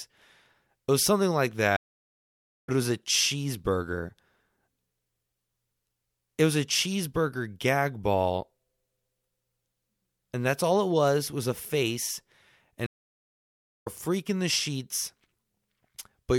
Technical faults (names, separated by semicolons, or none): stream reconnect